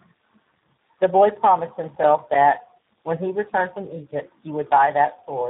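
This is a speech clip carrying tandem speech coding from start to end. The speech sounds rough, muffled and warbly, and nothing is present above 3.8 kHz. That points to three speech codecs in a row, ending in a low-rate coder such as G.729A. Each border decoded the speech and coded it again, so every stage worked on damaged input and the losses stacked up. From 1.88 to 2.35 s there is processor overload crackle. It sounds like a gritty tearing over the speech. The processor missed several audio deadlines in a row. Each missed buffer left a short hole of silence with hard edges, around 5 ms long. Those gaps come close together and merge into the crackle. It stops once the load passes.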